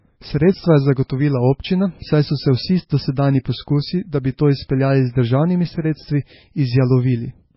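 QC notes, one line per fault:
Throughout – MP3 compression: the speech has no content above about 5.6 kHz and a heavy watery, swirling quality, with s sounds turning into metallic chirps and consonant onsets smeared. This is likely low-bitrate MP3 encoding; the damage fits roughly 17 kbps, where the encoder drops the treble and toggles weak frequency lines on and off frame to frame. On a spectrogram there is a hard ceiling at 5.6 kHz and patchy, flickering blocks below it.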